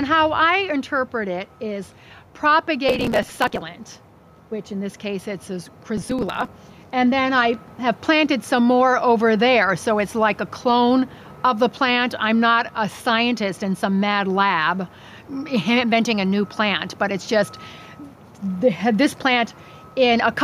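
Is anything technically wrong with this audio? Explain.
Yes, there are two faults.

Gain pumping runs throughout. The background swells in the gaps and ducks by about 5 dB under each loud sound, likely from input gain set too high with a fast limiter clamping down. On a waveform the envelope looks flattened, and quiet stretches rise between peaks.

Processor overload crackle occurs from 2.89 to 3.62 s and from 5.97 to 6.48 s. Dozens of buffer deadlines were missed and the audio was skipped, giving a gritty tearing. The gaps fit a buffer of around 5 ms. A spectrogram shows dense vertical broadband streaks, and the waveform shows hard-edged jumps.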